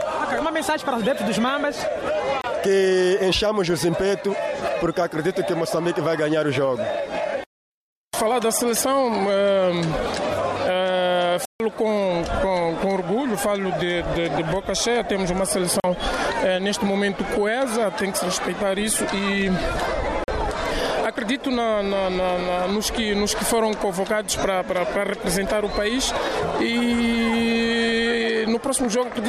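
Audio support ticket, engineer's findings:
Block of digital silence at 2.41–2.44 s, 11.45–11.60 s, 15.80–15.84 s, 20.24–20.28 s: hard cuts to silence. Output buffer likely not filled in time; likely playback path underrun.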